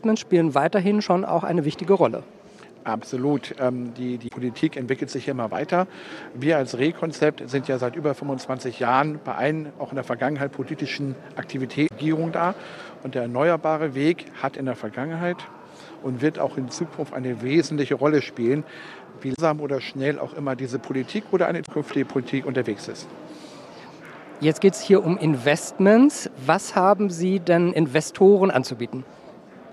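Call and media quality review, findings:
Damaged data in a compressed stream: short glitches (chirp, squawk, click or brief hole), about 70 ms each, at 4.25–4.31 s, 11.85–11.92 s, 19.32–19.39 s and 21.62–21.69 s. Probable component is the compressed file or stream feeding the decoder. Corrupt frames are misread and the decoder loses sync until the next frame header.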